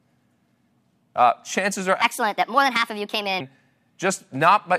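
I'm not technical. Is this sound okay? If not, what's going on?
No. Just after "chances are", from 2.02 to 3.40 s, there's a section at the wrong speed, likely from a player or editor running that stretch on the wrong clock. It plays 1.35 times too fast, so the speech sounds rushed and about five semitones higher.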